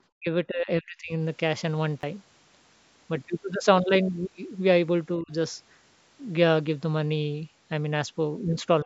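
Speech, passing through a call's microphone processing with nothing above 8 kHz. The speech level collapses three times: by about 40 dB from 0.17 to 0.28 s, about 35 dB from 0.44 to 1.12 s, and about 20 dB from 5.18 to 5.32 s. The likely cause is speech suppressed in double talk. The echo canceller mistook overlapping talk for loudspeaker echo and turned it down. At 2.01 to 2.03 s there is a repeated buffer. A tiny slice plays three times in a row, heard as a brief buzzing stutter. The length of each repeat, about 12 ms, fits a 512-sample buffer replayed while new audio was late.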